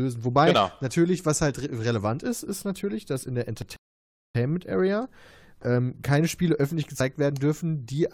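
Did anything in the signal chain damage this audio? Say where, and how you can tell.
Yes. At the driver or buffer stage, two dropped buffers (overrun) are audible as jumps in the speech: one at 3.62 s, right after "natürlich dass in der", and one at 7.00 s. Each is likely an overrun, where the capture software fell behind and the hardware overwrote samples. About 20 ms goes missing at the first and roughly 70 ms at the second. There is no silence; the two sides of the gap simply butt together.

At the playback stage, a rebuffering stall follows shortly after "natürlich dass in der". The speech cuts to silence from 3.76 s to 4.35 s, then picks up exactly where it stopped. The player ran dry of downloaded audio and waited for more, adding 0.58 s to the clip. This differs from the dropped buffers because nothing is lost and there is a clean gap rather than a click and a skip forward.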